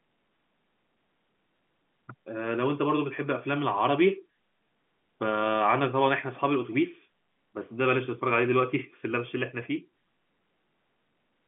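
No faults detected; the speech sits in an ordinary G.711 A-law telephone channel with a line band of roughly 150 Hz to 3.4 kHz and nothing above about 3.7 kHz.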